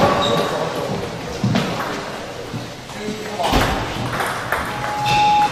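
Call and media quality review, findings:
Loudspeaker feedback squeal, 4.49 to 5.49 s. Single tone at 834 Hz swells over most of a second, ends up about 10 dB over the program. Probable component: open mic hearing its own speaker. Loop gain tops unity at 834 Hz, so that tone keeps feeding itself. Worth checking mic placement or a notch there.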